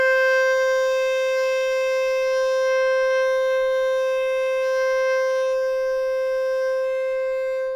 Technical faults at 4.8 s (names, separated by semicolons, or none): none